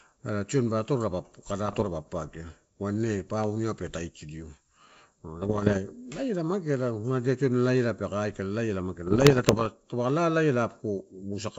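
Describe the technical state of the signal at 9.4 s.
At 9.4 s the speech sits inside a burst of bit errors on an ADPCM link, running from 9.06 to 9.67 s, with roughly one bit in a hundred flipped on the G.722 stream. Each corrupted bit knocks the decoder's adaptive step size and predictor off track, so the damage carries on for some milliseconds until it re-converges. The result is clicks and rough, gritty bursts with brief jumps in level.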